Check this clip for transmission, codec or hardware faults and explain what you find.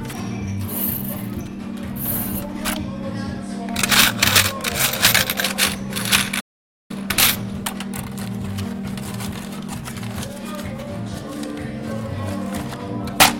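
Two linked faults show up around the middle of the clip: a playback stall followed by time-compressed catch-up.

From 6.40 to 6.91 s the sound stops dead for about half a second (491 ms), then resumes where it left off. This is likely the player running short of data or its thread being blocked. Unlike a network dropout, nothing is skipped; the material simply waits.

From 6.91 to 9.91 s the player works off that backlog by running the audio at 1.1 times speed, cutting and cross-fading short slices. The result sounds hurried, but the pitch stays put, which separates it from a sample-rate mismatch where pitch would rise too.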